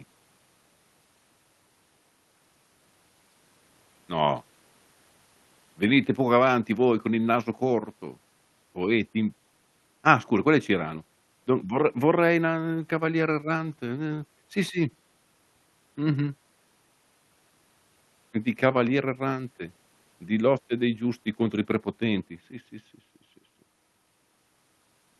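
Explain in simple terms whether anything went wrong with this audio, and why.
Nothing stood out on listening to this speech recording; it sounds like a normal internet call.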